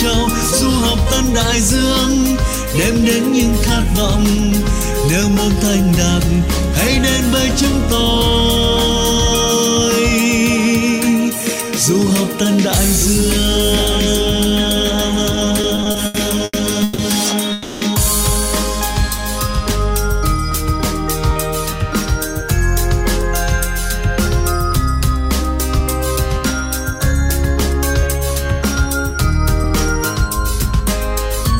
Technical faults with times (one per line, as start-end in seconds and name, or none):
15.61-17.01 repeated stalls (stutter)
17.52-17.84 call audio freeze
24.72-30.80 jitter buffer speed-up